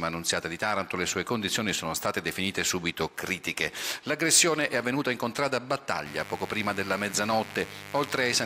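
The audio carries mains buzz from 6.06 s through to the end at 8.46 s: a steady, raspy buzz built on 50 Hz harmonics extending into the kilohertz range, sitting roughly 15 dB below the programme. Sharp switching spikes from a dimmer, rectifier or poor shielding explain its edge.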